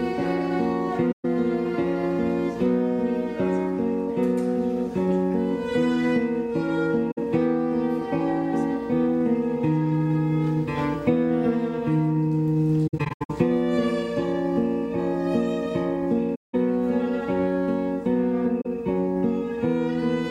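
AAC frame loss with muting shows up at 1.11–1.25 s, 7.11–7.18 s, 12.87–13.31 s (scattered gaps, longest around a tenth of a second), 16.35–16.55 s and 18.61–18.66 s. Lost frames decode as silence, so the sound fades into soft-edged holes.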